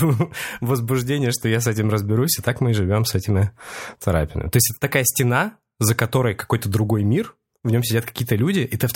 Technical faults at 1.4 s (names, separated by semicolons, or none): none